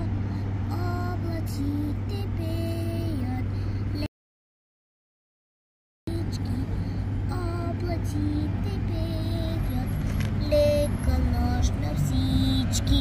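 At 4.06 s the sound cuts off dead and stays silent, with no room tone at all, until it picks up again mid-flow at 6.07 s. That's an audio dropout to silence, about 2 s lost, likely from the input dropping out while recording carried on.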